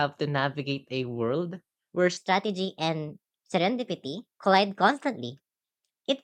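At about 2.17 s the speech suddenly jumps into a section at the wrong speed, and it stays that way right to the end. From that point the audio runs about 1.19 times too fast, so the voice turns high and hurried, sitting roughly three semitones higher than the opening. Pitch and tempo shift together, which most likely means that stretch was played back or rendered against the wrong clock.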